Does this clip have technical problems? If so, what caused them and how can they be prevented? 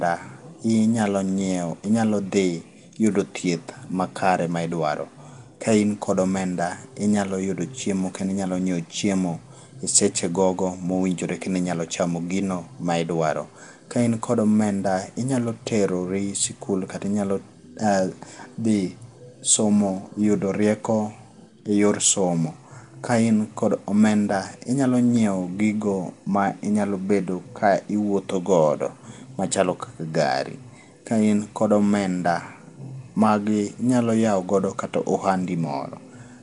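Yes. Throughout, the speech sounds hissy, smeared and underwater, with nothing above 10.7 kHz, likely from Nellymoser compression replacing starved weak bands with noise. Prevent it by recording with a modern codec or lossless format instead of Nellymoser Asao.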